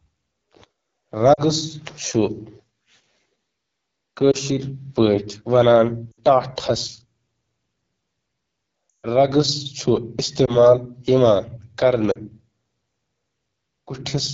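Right from the start the speech carries the rough, raspy edge of the AMR wideband (HD Voice) codec running at 8.85 kbit/s, one of its lowest rates. The vocal tract model plus pulse excitation can't keep up, so voicing sounds gritty and the top band from 6.4 to 7 kHz is thin, noise-filled shimmer.

On top of that come lost AMR speech frames at 1.33–1.41, 4.31–4.36, 6.11–6.20, 8.90–9.06, 10.45–10.70 and 12.11–12.18 s. The decoder fills each gap by repeating the last good settings at falling gain. The single-frame ones are quick warbly dips. The one at 8.90 s, long enough for roughly seven 20 ms frames, drops to near silence within two frames before the speech comes back a bit rough.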